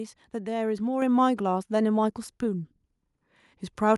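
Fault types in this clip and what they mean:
Microphone volume stepped up: at 1.02 s the speech and the background noise both jump up together by about 5 dB in a single step, because the call software judged the microphone too quiet and raised the device's input gain.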